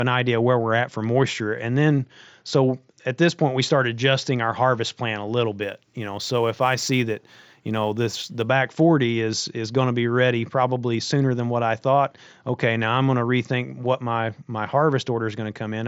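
From 5.63 to 8.46 s, sample clock jitter adds roughness, about 30 dB down, that follows loud, bright speech and vanishes in pauses, unlike constant hiss. Throughout, the headset-codec band tops out near 7.7 kHz.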